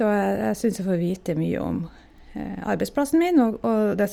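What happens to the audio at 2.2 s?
At 2.2 s the speech carries the grainy, breathy edge of Bluetooth LC3 compression running throughout, likely from noise-filling of coarsely coded upper bands, which appear as speckled noise below a 20.3 kHz ceiling on a spectrogram.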